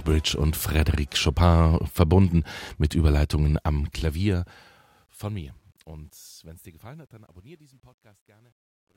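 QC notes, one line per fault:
3.59–8.96 s, truncation distortion on a fade: across the fade-out on this speech, the signal is requantised without dither. The coarseness fits about 11 bits. As the level shrinks toward the smallest step, the waveform collapses into a few square steps, adding grit that worsens from 5.98 s to the end.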